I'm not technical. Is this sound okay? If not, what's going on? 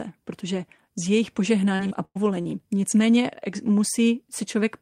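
No. From 1.75 to 2.47 s, right after "protože s jejich", repeated packet loss (robotic sound) hits: four gaps, each patched by stretching prior sound, making speech choppy and robotic.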